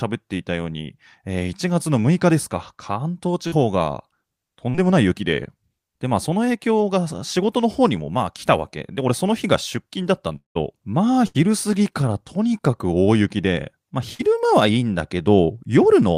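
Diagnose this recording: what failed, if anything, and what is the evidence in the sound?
Short concealed packet loss on the network path at 3.47 s, 4.70 s and 14.14 s. Each event is a brief smear or wobble of about 60 ms: roughly 40 ms of speech never arrived, and the receiver bridged the hole by extending the preceding sound before blending back.

From 10.36 to 10.57 s the speech turns into a continuation buzz or hiss that fades and then drops to near-silence for about 0.14 s. About 200 ms of audio is gone, most likely from a long network dropout, and speech resumes past the lost portion.

A burst of packet loss runs from 11.27 to 11.36 s, removing about 80 ms of audio. The receiver continued the last sound and attenuated it across the gap, then resumed further on with the intervening speech missing.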